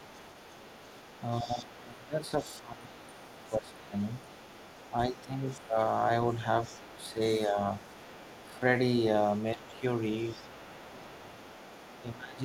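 From the start to 12.18 s the other side's voice leaks through faintly, around 25 dB under the talker, likely a loudspeaker echo the canceller didn't fully remove. Speech is suppressed in double talk at 1.41–3.94, 5.09–5.78, 6.4–7.57, 9.54–11.25 and 12.12 s to the end. The voice sinks by up to roughly 20 dB, likely because the canceller couldn't separate it from that echo and turned both down.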